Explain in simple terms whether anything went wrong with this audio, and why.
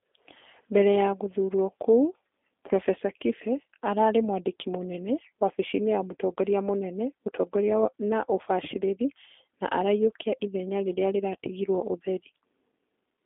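G.729 codec damage runs through the whole clip: this internet-phone codec rebuilds speech from a simplified model, leaving it thin, slightly rough and synthetic, with no sound above 3.7 kHz.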